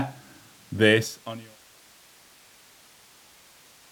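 The speech clip shows no technical faults. The level fades out smoothly from around the beginning, reaching its end at 1.61 s with no click or hard edge, much as an editor would shape it.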